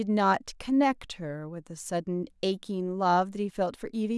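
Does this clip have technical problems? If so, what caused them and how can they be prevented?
No, there are no technical faults in this recording, so there is nothing to trace or prevent.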